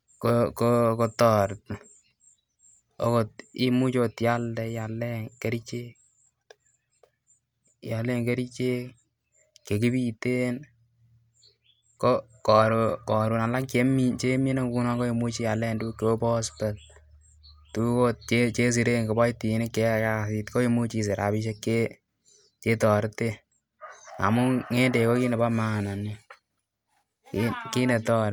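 No technical faults are audible anywhere in this recording.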